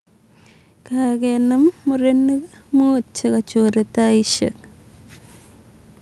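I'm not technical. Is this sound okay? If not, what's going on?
No. From 0.9 to 4.46 seconds, automatic gain rising happens. The system thought the speech was too quiet, so it slowly turned everything up, background included.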